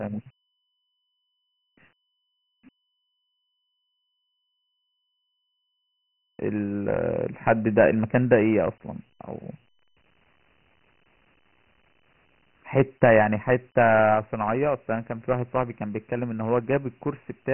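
From start to finish it's Dialogic VOX ADPCM: nothing above 3.1 kHz, which fits 6 kHz sampling at 24 kbps, and heavy gritty hiss trailing the speech.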